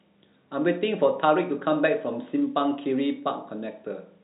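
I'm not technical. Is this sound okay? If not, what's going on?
Yes, this speech sounds fine; nothing here is wrong.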